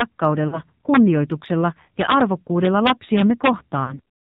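Buzzy, synthetic-sounding speech with nothing above 4 kHz throughout comes from the AMR narrowband mobile codec, and the plainly audible damage fits a low rate around 7.4 kbps. Violent cracks on loud peaks at 0.01 s, 2.01–2.21 s and 2.65–3.49 s are integer overflow, where levels only about 1 to 2 dB past full scale wrapped to the opposite sign. Brief drawn-out, fading dips at 0.48–0.61 s and 3.84–4.00 s are lost AMR speech frames. Each sounds like about 40 ms of missing audio, which fits two dropped 20 ms frames that the decoder concealed with its last settings at falling gain.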